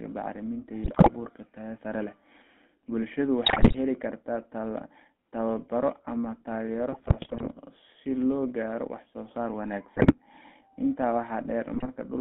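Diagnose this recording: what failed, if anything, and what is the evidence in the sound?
GSM full-rate codec, throughout the speech. This is a codec-stage fault. The voice has a steady buzzy, gravelly roughness. Nothing reaches above about 3.4 kHz or below about 200 Hz, so the sound is held to the narrow phone band. The character fits the 13 kbps full-rate coder. It models the vocal tract and rebuilds the excitation from regularly spaced pulses that keep only every third sample, which leaves that coarse, grainy texture.

GSM bit errors, at 0.84–1.11 s, 3.46–3.75 s, 6.92–7.47 s, 9.97–10.14 s and 11.68–11.88 s. This is a network-stage fault on the radio link. In each burst the speech breaks into squawks, pops and gargling. The longest burst, at 6.92–7.47 s, is the most drawn out. Corrupted bits reached the decoder. When filter, pitch or gain values arrive flipped, the decoder bends the spectrum or throws the level out frame after frame while the bad patch lasts.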